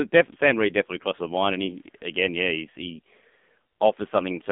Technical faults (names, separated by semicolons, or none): AMR narrowband mobile codec